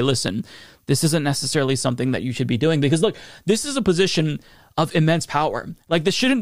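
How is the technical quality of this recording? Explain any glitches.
No glitches can be heard anywhere in this recording.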